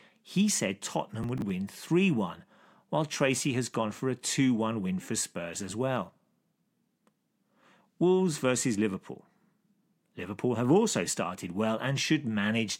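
At 1.23 s there's a short burst of processor overload crackle, lasting until about 1.5 s. The processor couldn't keep up, missing a handful of buffers of roughly 10 ms each. Each miss replayed a scrap of old audio with hard edges, so the speech picks up a gritty tearing that clears once the load passes.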